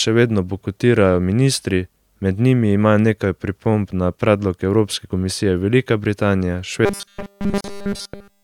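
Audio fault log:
6.85–8.43 s, robotic sound from repeated short buffers: a rigid metallic buzz at 200 Hz, likely from looping a 5 ms buffer that replaces essentially all the real audio.
7.61–7.64 s, gap at a join of encoded pieces: a 35 ms gap with smeared edges, where separately encoded pieces kept their start delay and end padding.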